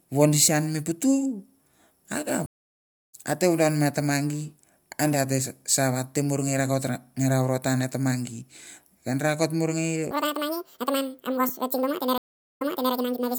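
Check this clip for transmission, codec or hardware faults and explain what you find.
Three faults appear in the speech: two stream reconnects and a section at the wrong speed.

Stream reconnect, 2.46 to 3.14 s, and again 12.18 to 12.94 s. Both times the connection dropped, playback went silent, and a fresh decoder picked the stream up mid-flow. The first gap lasts 644 ms, and the speech resumes roughly 0.7 s further on, so a stretch is simply missing. The second gap is 403 ms, but the stream restarts 360 ms earlier, so a short piece is heard twice.

Section at the wrong speed, 10.11 s to the end. The speech runs 1.92 times too fast, with pitch raised by roughly ten semitones, so the voice becomes high and hurried in one step. Speed and pitch rising together means the audio was played against the wrong clock, likely a player or editor assuming the wrong sample rate. The second reconnect falls inside this sped-up stretch.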